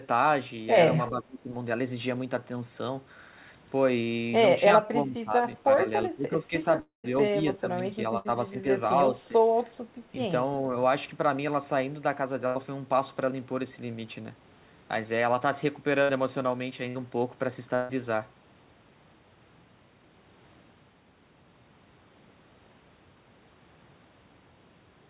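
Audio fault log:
1.1 to 1.51, 4.84 to 5.63, 6.07 to 6.53, 7.30 to 7.82, 8.51 to 8.64 and 9.16 to 9.40 s, speech suppressed in double talk: the speech ducks, by roughly 20 dB at its deepest near 1.1 s and by smaller amounts later, likely because the echo canceller turned the near talker down along with the far-end echo. Unlike packet loss, no buzz or hiss is inserted. The level simply sags and thins.
4.04 to 4.08 s, short concealed packet loss: about 20 ms of audio failed to arrive, and the decoder filled it by extending the preceding sound before crossfading back. The result is a brief smear or wobble rather than a gap. It is far shorter than the bursts later in the clip, so the sound does not audibly fade or go silent.
6.80 to 7.06 s, long network dropout: about 240 ms never arrived, likely a stall in the network. The receiver first stretches the last sound into a decaying buzz or hiss, then runs out of material, leaving about 140 ms of silence before speech resumes partway ahead. 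That fall into silence is what distinguishes it from the shorter bursts, which never empty out.
8.18 to 8.27, 12.47 to 12.57, 16.03 to 16.11, 16.89 to 16.97 and 17.75 to 17.91 s, burst of packet loss: runs of consecutive packets were lost, 60 to 80 ms each and 140 ms at 17.75 s. Each gap is bridged by a held, fading continuation of the previous sound, so it comes out as a brief drone or hiss, not silence. Within the telephone-band audio, cut off above 4 kHz by G.711, these are short held buzzes or fading hiss.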